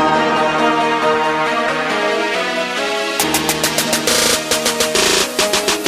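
No technical faults can be heard anywhere here.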